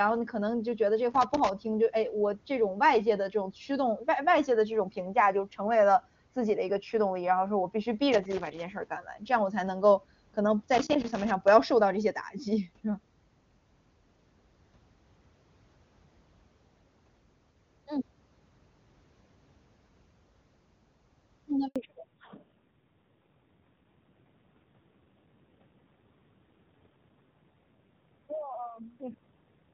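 Loose connector crackle turns up three times: 1.11 to 1.49 s, 8.12 to 8.77 s and 10.74 to 11.48 s. A worn contact is making and breaking, chopping the signal into short bursts of scratchy, uneven crackle.

At 21.68 s there's a handover gap. The call switches networks, no speech frames get through for 80 ms, and the audio fades quickly to silence before the new link picks up at 21.76 s. Anything said in that window is gone.

From 21.76 s to the end there's a fallback to narrowband. Before this the call has HD Voice clarity that fits the higher AMR-WB rates. After it, nothing above 4 kHz survives. The audio goes duller and rougher, which fits AMR-NB at around 7.4 kbit/s.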